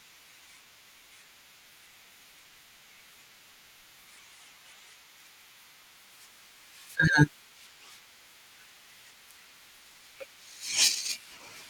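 From 5.92 s to the end at 11.70 s, the speech takes on a rough, metallic edge that drops away in pauses. This is periodic clock jitter: interference wobbling the converter's clock at around 2 kHz sets sidebands either side of every component, strongest on high frequencies.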